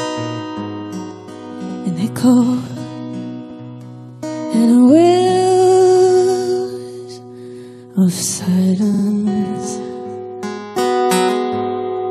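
At 1.68 to 1.75 s and 3.50 to 3.59 s, a short block of about 70 ms and then 93 ms plays twice. At 8.93 to 9.02 s, a 46 ms block plays three times. These are repeated frames: nothing is skipped, and the stutter only lengthens the sound.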